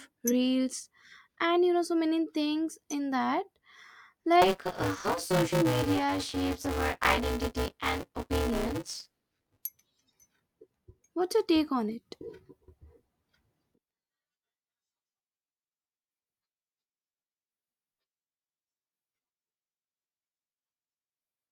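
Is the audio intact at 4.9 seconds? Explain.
No. At 4.9 s you're right inside a stretch of buffer tearing that runs from about 4.42 to 9.62 s. The writer and the hardware reader have drifted so they cross mid-period, so roughly half of each buffer is stale audio from about 20 ms earlier, hard-spliced on both sides. That gives the speech a robotic buzz at 188 Hz, which fits a 256-sample buffer, and it rides along only while there's signal.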